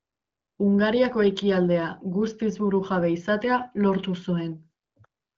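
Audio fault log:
No faults logged; the speech passes through an AMR wideband (HD Voice) codec path with nothing above 7.6 kHz, and its light coding texture fits a rate of about 15.85 kbit/s.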